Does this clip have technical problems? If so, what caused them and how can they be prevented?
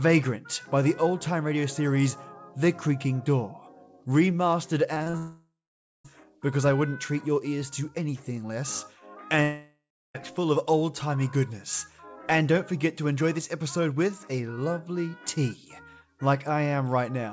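Yes. From 4.94 to 5.15 s there is repeated packet loss (robotic sound): four short gaps, the longest 35 ms, patched by extending prior sound, so nearly half that stretch sounds choppy. Forward error correction and a slightly deeper jitter buffer would prevent this.

Two long network dropouts follow, at 5.17 to 6.11 s and 9.43 to 10.16 s. A fading buzz gives way to silence of about half a second and a third of a second. The audio then resumes with roughly 0.9 s and 0.7 s missing, likely from a network outage. A stable wired connection with redundant transmission would prevent this. Throughout, the G.722 call path leaves nothing above 8 kHz.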